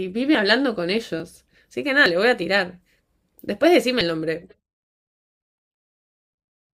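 At 1.2 s the speech jumps forward with no gap, and at 2.06 s a second, larger skip cuts away a brief sliver of sound, roughly a few hundredths of a second, before the audio picks up again. These are likely dropped buffers (overrun): the recording software failed to read a block of samples before the hardware wrote over it, so that short stretch was lost and the surrounding audio was spliced straight together.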